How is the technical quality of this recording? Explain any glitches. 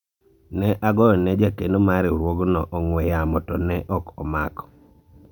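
Nothing here stands out as a glitch, so there's no technical fault in this recording to explain.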